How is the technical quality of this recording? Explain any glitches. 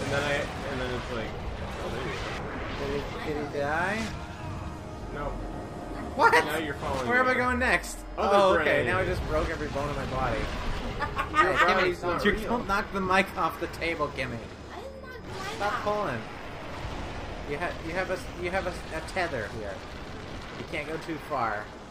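No glitches turn up anywhere in this recording, so there's nothing here that needs explaining.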